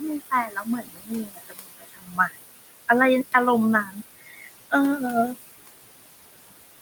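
Noise suppressor artifacts run through the whole clip. The room noise, about 12 dB below the speech, gets pushed down by about 19 dB in the gaps. The suppressor also cuts speech by mistaking parts of it for noise. From 0.2 to 2.4 s, about a second and a half sounds swallowed, dropping by up to about 22 dB. Shorter faint patches follow at 3.85 to 3.97 s (about 9 dB down) and 4.18 to 4.5 s (about 17 dB down).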